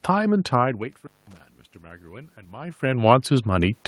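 Around 0.93 s there's an intermittent contact, likely a loose cable or plug. The line drops out for about 0.2 s somewhere before 1.41 s, with crackle at the edges of the gap and faint hiss underneath while it's open.

From 1.83 s to 3.8 s you get automatic gain rising. The input level fell by about 22 dB, so the AGC slowly pushed its gain up by about 4 dB. The voice and the room noise swell up together.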